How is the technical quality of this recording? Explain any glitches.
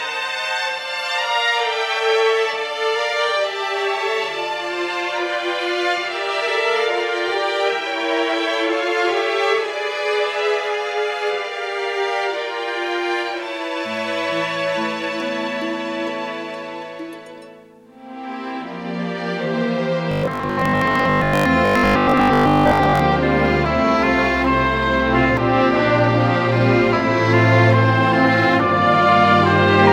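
One fault is audible: robotic sound from repeated short buffers, from 20.12 to 23.00 s. For that stretch the audio turns into a rigid, metallic buzz pitched at 50 Hz that still tracks the contour of the sound roughly. The likely cause is new audio arriving too seldom, so playback keeps looping the last 20 ms in place of most of the real material. That 50 Hz buzz could be confused with mains hum, but hum sits steadily underneath intact audio, whereas here the sound itself is replaced and the buzz disappears once the stretch ends.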